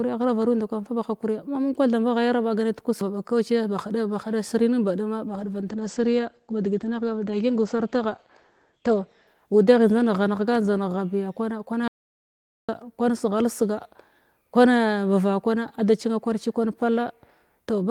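Just after "nin baduma", at 5.28 s, a call bitrate drop sets in and lasts until 10.59 s. The top end shrinks from 20 kHz to 8 kHz, so the speech turns muffled and rough. This fits the encoder falling from about 32 to 12 kbps. It stays at its worst for about 3.75 s.

From 11.88 s to 12.69 s comes an audio dropout to silence. The speech stops dead for about 0.81 s. The gap is silent with no room tone. Speech resumes on "kwan seghal". The input was likely lost while recording continued.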